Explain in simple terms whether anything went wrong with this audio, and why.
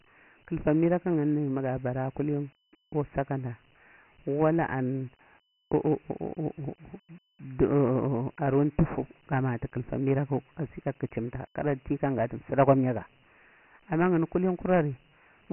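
Dialogic VOX ADPCM coding runs through the whole clip. The speech stops near 3 kHz and trails a gritty hiss, unlike a plain telephone line's clean muffling.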